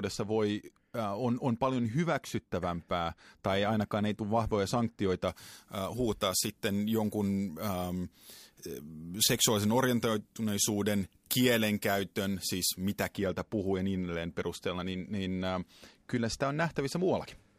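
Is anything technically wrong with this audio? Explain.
Yes. From 5.28 s, after "ei tule vahvoja sanktioita", to 13.14 s, before "puhuu ja niin edelleen", pre-emphasis is left on: the FM-style 75 µs treble boost has no matching de-emphasis, so 10 kHz sits about 14 dB high relative to 1 kHz. The speech turns thin and hissy-sibilant. A rising shelf across the whole treble, not a narrow resonance, sets it apart.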